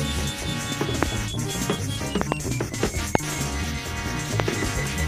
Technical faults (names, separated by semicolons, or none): loud pop